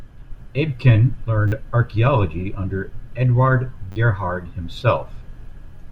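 Repeated buffer at 1.48 to 1.52 s, just before "archeology under", and at 3.92 to 3.96 s. New audio arrived late, so a chunk consistent with a 10 ms buffer replayed several times, giving a brief buzz and skipping roughly 40 ms.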